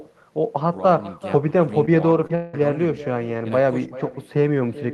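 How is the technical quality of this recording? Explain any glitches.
The recording is clearly degraded: a constant talker echo runs through the whole speech, and two brief concealment glitches plus a longer gap cluster between 1.85 and 2.55 s.

Echo with no canceller affects the entire clip. The far end's loudspeaker output is picked up by its microphone and sent back uncancelled, so every phrase returns around four tenths of a second later, about 17 dB quieter and thinner. On a spectrogram, each speech burst has a faint, slightly blurred duplicate trailing it at a fixed offset. In the waveform, the low-level tails after phrases carry this lagged copy instead of falling to quiet.

Short concealed packet loss occurs at 1.85–1.89 s and again at 2.27–2.31 s. Each time, about 20 ms of audio failed to reach the decoder in time, and the receiver synthesised a replacement by extending the preceding sound before crossfading back into real audio. 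Each is heard as a quick smear or wobble. On a spectrogram, harmonics flatten or freeze briefly. In the waveform, a short stretch looks unnaturally repetitive or smoothed.

The long network dropout spans 2.35–2.55 s, immediately after the second glitch. For roughly 0.2 s the sound turns into a steady buzzy or hissy continuation that fades, with no silent hole. This is likely a network dropout during which no audio arrived, so the receiver kept extrapolating for its full length. On a spectrogram, this shows as a smeared, stationary band lacking the normal speech modulation. In the waveform, the envelope decays smoothly and then picks up abruptly when real audio resumes, with the underlying content missing.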